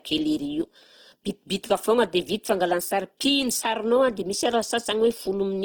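Speech runs through the whole clip with plainly audible codec damage: the sound is noisy, rough and grainy, while the bandwidth stays full, reaching up to 20 kHz. This is likely Opus compression in its music (CELT) mode at a rate that fits roughly 16 kbps. Bands are kept at their energy but filled coarsely, which produces grain rather than swirl. From 0.61 to 0.75 s the level falls abruptly by about 6 dB and then recovers. That step with no other change likely means one channel drops out of a stereo source whose two sides carried the same signal, so the mono sum briefly halves.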